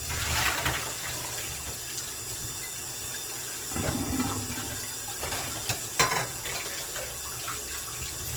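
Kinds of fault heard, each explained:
Opus compression: The sound is noisy, rough and grainy throughout, likely from Opus in music mode at a rate that fits about 16 kbps. Bands are noise-filled instead of emptied, so a spectrogram shows few holes but smeared, speckled texture extending to 20.1 kHz.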